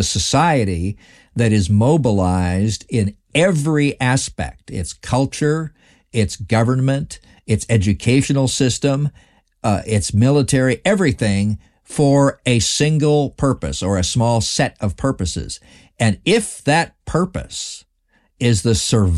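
Nothing in this speech recording stood out as a technical problem on listening.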